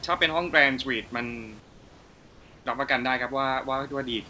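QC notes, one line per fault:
1.60–2.66 s, comfort noise in place of the background: for about 1.06 s in the pause, the real room noise, sitting about 26 dB below the loud parts, gives way to a steady, featureless hiss about 3 dB quieter, then the original background returns with the sound. Likely cause is discontinuous transmission, where the sender stopped sending during silence and the receiver synthesised shaped noise to fill the gap, ending at the 8 kHz top of the G.722 call path.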